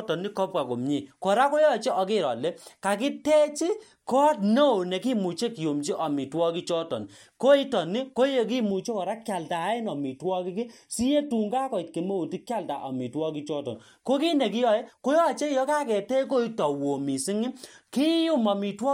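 From 8.70 to 13.75 s the speech turns hollow and phasey, a sign of channel delay (comb filtering). One channel arrives roughly 0.4 ms late. Summed to mono, shared content cancels at evenly spaced frequencies. The first notch sits near 1.5 kHz.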